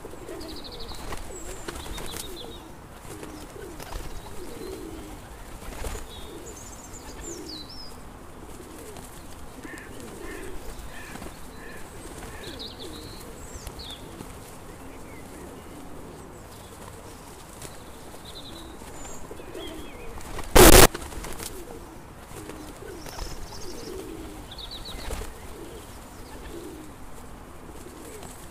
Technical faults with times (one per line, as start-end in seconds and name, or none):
20.56-20.86 float read as integer